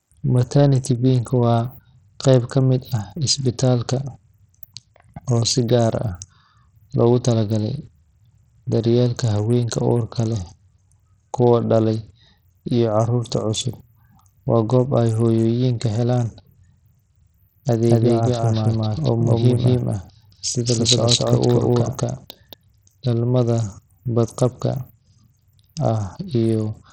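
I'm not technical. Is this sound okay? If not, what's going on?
No, it isn't clean. Throughout the speech there is Bluetooth SBC compression damage, likely from a low-quality Bluetooth link. SBC splits the sound into a few broad frequency bands and, when data is tight, starves the highest ones. Here the damage is heavy: the crisp top end of the voice drops away or flickers, and a gritty, grainy noise clings to everything, making the speech sound dull and rough.

From 17.88 to 22.54 s there is a doubled audio track, likely from the same audio being recorded twice through paths of different speed. A second, full copy of the speech plays about a fifth of a second behind the first and just as loud, so every syllable is heard twice. It isn't a room echo: the copy has no fade or reverberation, and it switches on and off abruptly at those two times.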